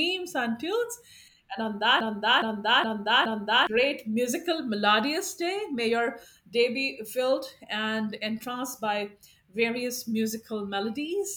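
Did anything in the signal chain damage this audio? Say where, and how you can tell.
Yes. A broken-record loop runs from 2.00 to 3.67 s: one 0.42 s fragment of speech repeats exactly four times back to back, and then the audio resumes at "musical melodious day". The likely cause is a stalled player or stream buffer replaying its last held fragment, so the original audio for that span is lost.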